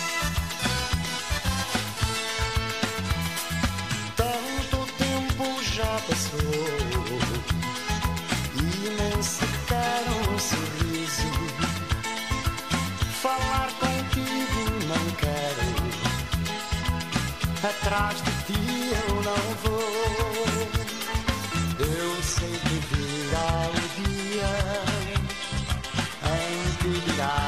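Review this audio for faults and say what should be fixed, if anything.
From 21.87 s to the end, the audio plays an adaptive stream at a lower bitrate. The player switched to a cheaper version of the stream when the connection slowed. The content above 12.3 kHz disappears and codec artefacts rise, which fits a step down from 96 kbit/s AAC-LC to a 16 kbit/s HE-AAC stream. The switch is abrupt with no gap or dropout, which separates it from packet loss. The quality before 21.87 s shows it isn't a low-bitrate encode throughout. To prevent it, buffer more or cap the lowest rung of the bitrate ladder.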